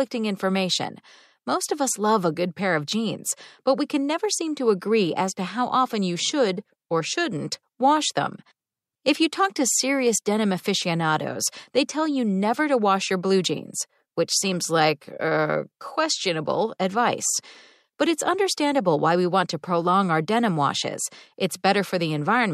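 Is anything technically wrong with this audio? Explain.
No, no technical faults heard.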